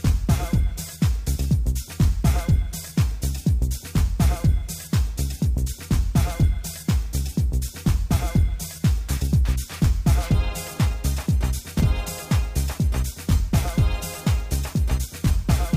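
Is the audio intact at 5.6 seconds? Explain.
Yes, the audio at 5.6 seconds is intact, with no fault audible at that moment.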